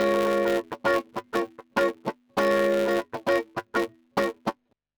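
A steady 200 Hz buzz runs through the whole clip, rising and falling with the level of the sound beneath it. This is a filter restarted on every block: it forgets its state between blocks and starts each from silence, so each block begins with a small transient. The 200 Hz rate points to blocks about 5 ms long.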